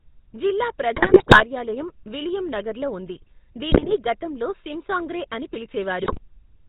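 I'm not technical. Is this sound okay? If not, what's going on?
No, it isn't. The whole thing goes through the old GSM full-rate codec, the original mobile phone voice coding. It rebuilds speech from a rough model plus a thinned-out pulse signal and drops everything above 4 kHz, so voices come out buzzy, gravelly and muffled.

On top of that there are GSM bit errors, where scrambled data on a weak phone link reaches the decoder and mangles the sound briefly. You'll hear squawks, pops and gargling from 0.96 to 1.44 s, 3.71 to 3.96 s, and 6.00 to 6.18 s.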